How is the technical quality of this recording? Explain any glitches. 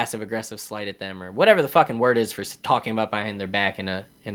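There's automatic gain rising twice: from 0.69 to 2.39 s, by about 5 dB, ending just before "talking about", then from 3.11 s to the end, just after "talking about". Each time the AGC judged the level too low and eased the gain up, so speech and background swell together.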